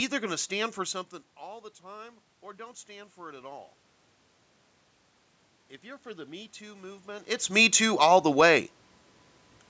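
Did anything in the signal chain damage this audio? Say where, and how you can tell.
Yes. Automatic gain rising at 0.88–3.73 s and 5.82–7.59 s: call-processing gain control, facing quieter input after the talker moved around 1 s, lifted voice and room noise together, about 5 dB then about 4 dB.

Automatic gain falling at 7.76–8.55 s: the same call-processing stage judged the input too loud or its background noise too strong and lowered gain by about 3 dB, so voice and background sink together.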